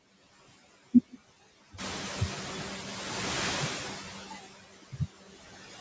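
Speech recorded through call microphone processing, with nothing above 8 kHz, shows noise suppressor artifacts throughout. The background is pulled down by about 13 dB between phrases and swells back under the speech. On a spectrogram, the noise floor blinks in and out frame by frame, leaving fluttering residual specks. The effect is clearer once the room noise rises by about 12 dB around 2 s, where it still sits about 12 dB below the speech.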